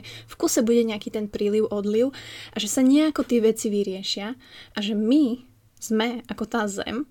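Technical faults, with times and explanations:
No technical faults can be heard in this speech clip.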